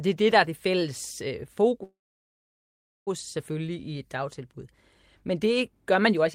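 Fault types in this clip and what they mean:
Call audio freeze: from 1.83 to 3.08 s, just after "er det fælles øh", the speech stalls into a brief fading tail and then about 1.13 s of silence, likely a starved jitter buffer. Unlike a dropout, nothing is skipped. Speech resumes where it stopped, 1.23 s late.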